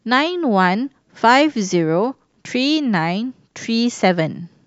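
Nothing in this bit of speech catches the ear as a fault, so there's nothing to flag here.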